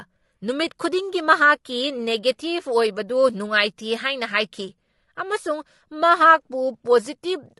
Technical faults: low-delay AAC compression

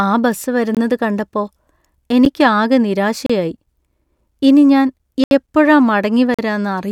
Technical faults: block of digital silence

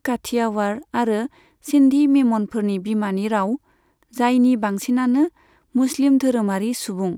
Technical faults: none

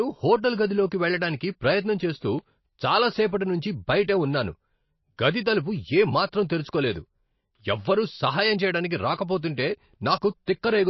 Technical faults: MP3 compression; pre-echo

